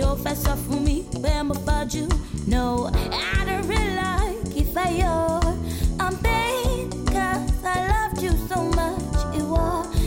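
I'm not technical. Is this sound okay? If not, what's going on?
Yes, nothing in this recording sounds technically wrong, so there's no problem here to explain.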